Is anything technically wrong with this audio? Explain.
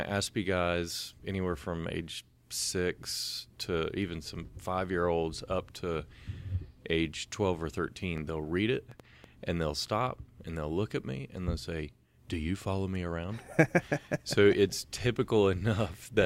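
Yes. Train of clicks, 8.18 to 9.25 s, before "and they'll stop and": about four unevenly spaced pops above the speech, likely from interference pulses.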